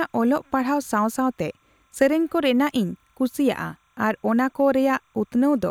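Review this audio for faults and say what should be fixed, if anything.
A faint, steady chirping warble sits behind the speech for the whole clip, about 45 dB below it. This is timecode bleed: linear timecode running at 29.97 frames per second, switching between roughly 1 kHz and 2 kHz, has leaked in from an adjacent track or cable. Keep timecode on isolated, well-shielded lines routed away from audio cabling, and set channel gain so unused code tracks cannot crosstalk into the program feed.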